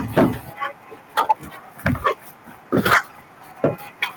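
Speech with microphone overload at 0.17–0.26, 1.17–1.32, 1.86–2.08, 2.74–2.98 and 3.64–3.67 s. The loudest syllables have their peaks flattened, giving a harsh crackle. The input level is likely set too high, driving the converter about 4 to 12 dB past its limit. The worst is at 2.74 s. A microphone volume step-down follows at 0.18 s. Voice and background drop by about 2 dB at once, right after that first distorted peak. This is likely the call software cutting the input gain in one step.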